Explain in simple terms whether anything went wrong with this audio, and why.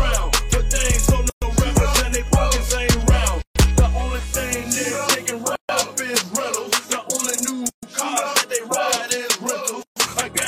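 The audio was encoded in separate pieces and joined without trimming the padding each encoder run adds, leaving a gap at a join of encoded pieces about every 2 seconds. Brief silences of 120 to 136 ms cut in at 1.30, 3.42, 5.55, 7.69 and 9.83 s.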